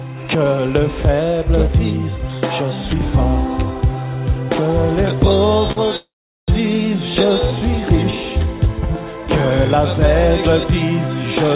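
At 5.72 to 5.78 s, a packet arrived late and the jitter buffer ran dry, so the receiver stretched the last sound by 44 ms: a short stall from a late packet, heard as a briefly held sound with a faint buzz or dip. From 5.96 to 6.50 s, packets were likely held up in transit, causing a call audio freeze. The receiver continued the last sound as a fading buzz or hiss, then about 410 ms of silence, before resuming where it stopped and inserting a 514 ms gap. Between 7.80 and 8.30 s, a jitter buffer slow-down rebuilt its reserve by repeating short fragments, adding 38 ms. The sound plays at 94% speed with unchanged pitch and slightly drawn out. Throughout, nothing above 4 kHz is present, which fits a narrowband call codec such as G.711.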